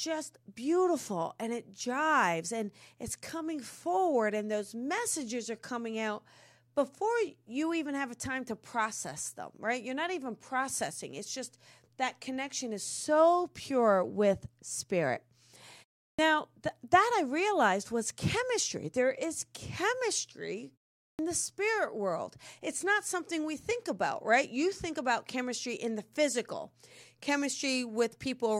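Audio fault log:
16.12 s and 21.12 s, clipped start after a pause: after silences of 0.36 s and 0.43 s, the sleeping output device wakes too late, swallowing 66 ms and 69 ms of sound; after "is chemistry", the phrase "the spirit world" bursts in missing its opening.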